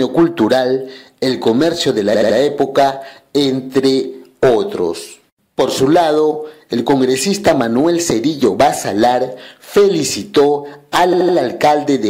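At 2.13 s and again at 11.12 s, repeated frames make the audio stutter: a 78.4 ms block plays three extra times, adding 235 ms each time. A spectrogram shows identical stripes repeating, and the waveform shows copied segments.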